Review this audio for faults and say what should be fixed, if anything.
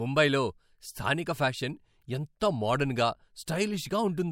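Pre-echo appears just before two sharp speech onsets, at 2.40 s and 3.46 s. A short hiss, about 21 dB and about 20 dB above the quiet floor, leads each attack by 11 ms and 19 ms and softens it. The codec spread noise sized for the loud onset across the whole transform block, which fits roughly 26 ms windows with no switch to short blocks. Unlike echo or reverberation, which trail a sound, this noise arrives before the attack. Enabling block switching, so the encoder uses short windows around transients, would prevent it.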